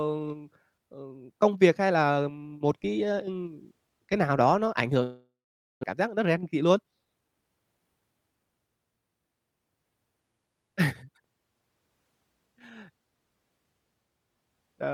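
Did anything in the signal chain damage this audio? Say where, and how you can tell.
Yes. At 5.03 s the speech breaks off, and the last sound is stretched into a fading buzz. About 0.49 s of near silence follows. Speech returns at 5.85 s with 0.6 s missing. This is a long network dropout, likely from packets lost in transit.

A jitter buffer speed-up follows, from 5.93 to 7.64 s. The speech runs about 111% of normal speed at unchanged pitch, so it sounds hurried. The buffer was overfull after the gap. The receiver repeatedly cut short pitch-period pieces, removing around a fifth of a second.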